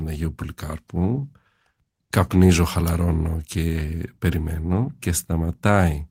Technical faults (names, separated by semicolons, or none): none